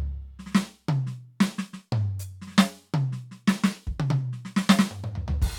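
No technical faults can be heard anywhere in this music. Nothing in the audio calls for comment on technical grounds.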